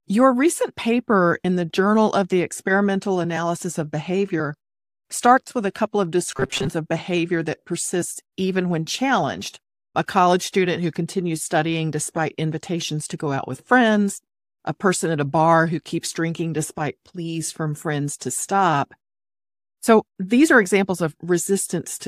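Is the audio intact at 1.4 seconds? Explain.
No. Just after "recent paper", lost LE Audio frames disrupt 1.42 to 1.45 s, a 37.5 ms gap that fits five 7.5 ms frames. The decoder reuses the last spectrum with random signs, giving a brief noisy smear: blurred harmonics on a spectrogram and noise-like filler in the waveform.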